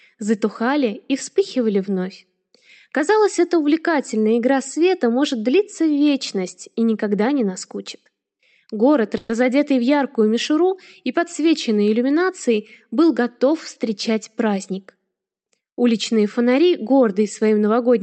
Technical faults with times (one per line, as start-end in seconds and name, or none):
9.17-9.31 call audio freeze
13.03-15.21 jitter buffer speed-up